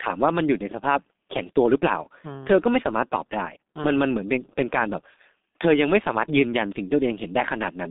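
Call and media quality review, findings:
Muffled, hoarse speech throughout, consonants smeared, nothing above 3.8 kHz, band roughly 200 Hz to 3.7 kHz. G.723.1 codec, heavy damage: 30 ms frames, slow-updating voice model, fits the 6.3 kbit/s mode.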